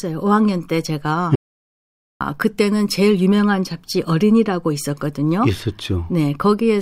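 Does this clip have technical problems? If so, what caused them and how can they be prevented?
Yes. The input feeding the recorder was most likely lost for a moment, through a loose connection, a dropped wireless or network link, or an accidental mute, while the recorder kept writing silence. The result is an audio dropout to silence from 1.35 to 2.21 s. The speech cuts off mid-flow, about 0.85 s of it is gone, and the gap is dead silence with no room tone before the speech resumes. Secure cables and links, and monitor input levels while recording.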